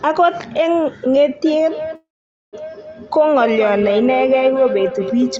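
From 1.46 s to the end, the speech comes back on itself roughly every fifth of a second: a feedback echo between two devices. A second device in the room is playing the call out loud, its sound is caught again by the microphone, and that microphone's echo canceller can't remove audio that another device plays. Each repeat is thinner and more ringing, peaking at about 8 dB below the speech. Room reverberation smears sound continuously, but these are distinct copies at a fixed spacing.

From 1.95 s to 2.55 s the sound stops: a brief fading buzz, then about 480 ms of silence, about 573 ms in all. This is likely a call audio freeze, where delayed packets left the jitter buffer empty and the receiver filled the wait. Unlike a dropout, nothing is cut out. The speech resumes exactly where it broke off, so everything after it arrives about 573 ms late. The call's 8 kHz bandwidth limit applies throughout.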